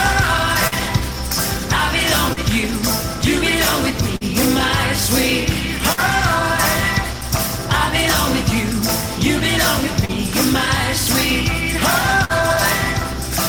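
A mains hum at 60 Hz runs under the whole clip, a steady low tone sitting roughly 10 dB below the signal. It comes from power-line interference, typically a ground loop or nearby transformer, coupling into the audio path.

Short concealed packet loss occurs at 0.67, 2.33, 4.16, 5.93 and 10.05 s. In each case about 40 ms of audio never arrived. The receiver filled the hole by extending the preceding sound for 34 to 45 ms, then blended back, so each event is a brief smear or wobble.

A burst of packet loss at 12.25 s drops about 40 ms of audio, and the receiver bridges it with roughly 47 ms of the previous sound, fading as the gap continues. Playback then resumes further along, with the intervening material missing.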